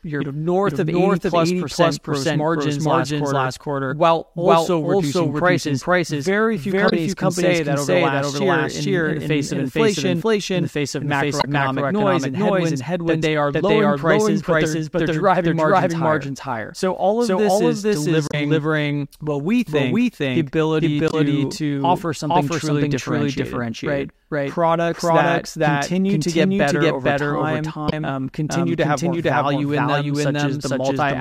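Throughout the speech, a doubled audio track is audible: a second full-band copy runs about half a second behind at roughly equal level, with no decay or room colour. It is likely a second capture path or misaligned edit mixing the stream in twice.

Damaged data in a compressed stream then produces short glitches at 6.86–6.93 s, 11.38–11.45 s (after "in the face of", before "noise and headwinds that"), 18.27–18.34 s (after "all of this is"), 21.07–21.14 s (after "we think the ability") and 27.86–27.93 s. Corrupted frames make the decoder lose sync briefly.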